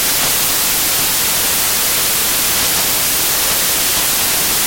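From the first moment to the last, the speech is buried under samples built from the wrong bytes. The reader assembles each sample from misaligned or swapped bytes. The quick-changing low bits end up as the dominant part of every value. The result is loud, harsh broadband noise across the whole clip.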